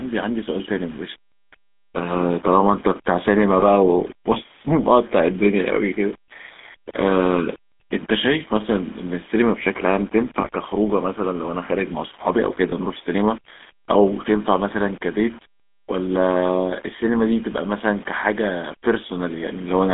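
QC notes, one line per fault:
Throughout: low bit depth without dither. A grainy, gritty distortion rides on the speech and shifts with it, sitting only about 25 dB below the signal and roughening the quieter syllables and decays. This is likely coarse rounding to around 7 bits with no dither, so the error tracks the waveform.
Throughout: GSM full-rate codec. The voice sounds buzzy and gravelly, and the band is narrow, running from about 200 Hz to 3.6 kHz with nothing above. The pulse-driven vocal-tract model, at 13 kbps, keeps only a sparse excitation, which produces that rough, plainly audible coded texture.
3.60 s, 10.42 s, 12.70 s: lost GSM frames. At each point a brief rough, metallic ring replaces the speech for about 20 ms. In each case a single bad frame was concealed by repeating the previous good frame's settings, so the sound smears instead of continuing.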